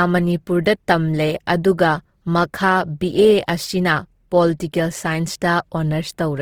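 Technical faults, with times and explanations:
Throughout, Opus compression: the speech has a rough, grainy, noisy texture across its full bandwidth, with content reaching about 20.3 kHz and no narrowing to a muffled, hoarse sound. The graininess comes from band energies being held while the finer detail is filled by folding or noise, which is likely Opus in its music mode at a low rate, about 16 kbps. Unlike MP3, it has few spectral holes and little swirling.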